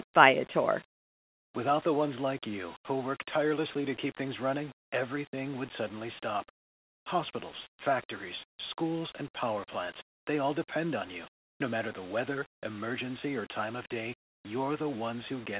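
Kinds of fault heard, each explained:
No technical faults can be heard in this speech recording; the signal stays steady and intact throughout, with nothing broken, interrupted or distorted.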